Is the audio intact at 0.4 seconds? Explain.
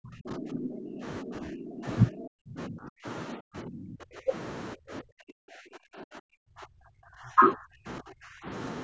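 No. Speech suppressed in double talk runs from 0.0 to 1.05 s, so 0.4 s falls inside it. The speech sinks by as much as roughly 25 dB, likely because an echo canceller, facing both sides talking at once, turned the near talker down along with the echo.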